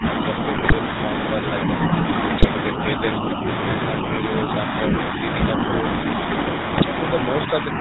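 Speech heard through the GSM full-rate codec throughout: a buzzy, gravelly roughness sits on every voiced sound, and nothing reaches above 4 kHz. That ceiling comes from the codec's narrowband design; its regular-pulse excitation keeps only every third excitation sample and rebuilds the voice through a vocal-tract filter. The character fits the 13 kbps full-rate coder. The rasp is tied to the pulse excitation, which separates it from the smoother, band-limited dullness of an ordinary narrowband filter. The call's microphone processing also takes out the lowest bass, which is normal and not a fault.

GSM bit errors break in three times, at 0.56 to 0.73 s, 2.38 to 2.47 s and 6.72 to 6.85 s. Each burst is a short cluster of squawks, pops and gargling spread over what sounds like several consecutive frames. Corrupted filter, pitch and gain parameters warp the spectrum or spike the level for each hit frame. 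These bursts are distorted, erratic sound rather than silence or a repeated fragment, which sets them apart from packet loss and its concealment.

Speech suppressed in double talk is the likely cause of what happens from 7.47 to 7.78 s. The voice dips by about 5 dB in patches that add up to roughly a fifth of a second. This happens when an echo canceller, faced with both sides talking at once, turns down the near talker along with the echo. The loss is a level drop with no garbling, unlike the bit-error bursts.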